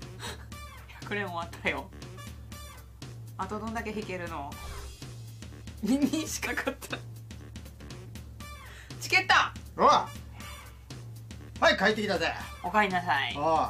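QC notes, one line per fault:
6.46 s compressed frames skipped: audio jumps ahead about a tenth of a second, fitting roughly five 23.2 ms frames; a jump without the silent gap of a dropout.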